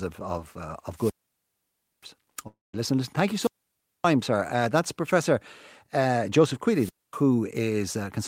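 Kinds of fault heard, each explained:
Wireless microphone squelch dropout: The analogue FM radio link between microphone and receiver weakened until the receiver's squelch shut the output off. Each time, hiss or static swells briefly, then the speech drops into near silence before returning. It happens three times: from 0.93 to 2.08 s with about 0.93 s muted, from 3.30 to 4.11 s with about 0.58 s muted, and from 6.71 to 7.23 s with about 0.24 s muted.
Long network dropout: Between 2.47 and 2.75 s the sound breaks in a way that points to a stretch of audio that likely never arrived over the network. About 0.26 s of the speech is missing. The gap is first filled by a continuation of the last sound that decays as a fading buzz or hiss, then goes to silence for about 0.18 s. The speech then resumes further on, with the lost portion simply absent.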